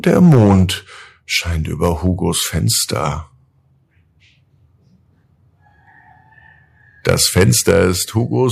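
From 0.18 to 0.63 s, microphone overload flattens the loudest speech peaks into a harsh crackle, likely because input gain drove them about 7 dB past the converter limit, clipping around a tenth of samples. At 0.35 s the microphone volume stepped down by about 4 dB, an abrupt drop in voice and background, likely the call software cutting input gain in response. The overload returns more mildly from 1.83 to 2.08 s, about 3 dB over, then from 7.09 to 7.82 s at about 7 dB over, with another volume step-down of about 5 dB at 7.71 s.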